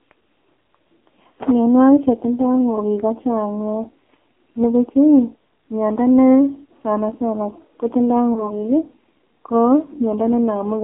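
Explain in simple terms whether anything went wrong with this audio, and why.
AMR narrowband mobile codec, throughout the whole clip: the speech has passed through the old 2G/3G phone codec at a very low setting, so the damage is heavy. It keeps only roughly 150 Hz to 3.4 kHz, which removes the crisp top of the sound. It also rebuilds the voice from a simple model of the throat and mouth instead of storing the actual sound, which leaves the speech buzzy and artificial.

Lost AMR speech frames, from 8.34 to 8.53 s: a short piece of the phone signal arrived damaged, so the decoder filled the gap by repeating its last good settings while turning the level down. The result is a brief dip or warble. The recovery then stretches over the rest of that span. The fact that the disturbance is so short points to a single lost 20 ms frame.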